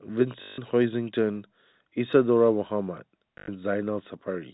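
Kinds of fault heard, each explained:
Packet loss with last packet repeated: when packets went missing, the receiver replayed the most recent one until new audio arrived. This causes a short robotic stutter from 0.42 to 0.58 s (160 ms) and from 3.38 to 3.48 s (100 ms). The repeats buzz at about 50 Hz, which fits 20 ms packets. A waveform shows one short segment copied end to end with small jumps at each join. A spectrogram shows the same short pattern recurring every 20 ms across the telephone band below 4 kHz.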